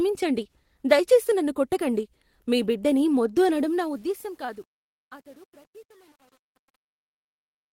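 From 3.52 s, truncation distortion on a fade sets in. The fade keeps too few bits, likely about 9. From 4.1 s the tail turns gritty.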